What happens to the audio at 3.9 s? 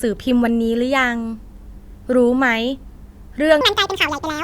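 From 3.61 s to the end, a section at the wrong speed plays 1.81 times fast, likely from a clock mismatch. The speech jumps nearly ten semitones higher and hurried, with harmonics shifted upward on a spectrogram.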